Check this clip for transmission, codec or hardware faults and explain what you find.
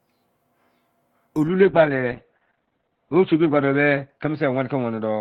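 There's one fault, a call bitrate drop. From 1.48 s to the end, the encoder falls from 32 to 7 kbps and bandwidth shrinks from 20 kHz to 4 kHz, so the speech turns muffled and rough, bottoming out for about 2.1 s.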